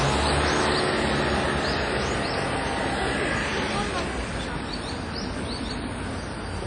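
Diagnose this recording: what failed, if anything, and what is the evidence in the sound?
The codec stage likely failed, with WMA compression at a low bitrate, around 32 kbps. Throughout, nothing survives above 10 kHz, and the sound rings and smears. Long transform blocks spread quantisation noise over tens of milliseconds, so hiss breathes with each sound.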